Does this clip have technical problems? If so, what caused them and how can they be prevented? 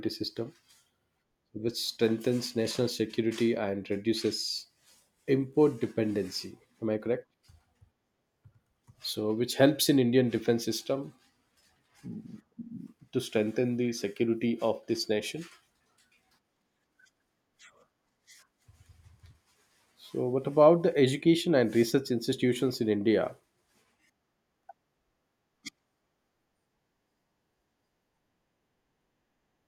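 No, no technical faults are audible.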